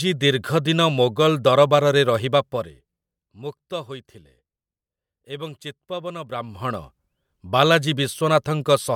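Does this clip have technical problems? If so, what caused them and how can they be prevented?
Yes. Zipper noise runs from 6.23 to 6.83 s: a ticking that rides on the speech while its level shifts by about 15 dB. The gain was changed in abrupt steps of about 1 dB, around twenty times a second, rather than moving smoothly. Each jump leaves a small click in the waveform, and together the clicks form a zipping texture. Ramping the gain sample by sample, or interpolating each change across the buffer, would prevent it.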